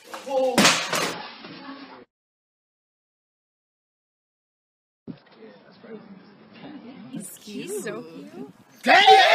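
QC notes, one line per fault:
1.13–7.13 s adaptive stream at a lower bitrate: abrupt, gapless quality drop as the stream steps down. Spectrogram shows a flat ceiling at 5.5 kHz with smeared, warbling codec artefacts.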